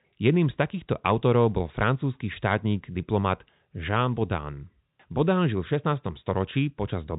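Nothing stood out on listening to this speech, which carries the narrow telephone band of G.711 coding with nothing above about 3.8 kHz.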